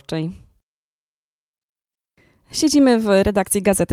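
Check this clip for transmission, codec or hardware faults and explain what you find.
No faults turn up anywhere in this speech recording. There is nothing here that needs explaining.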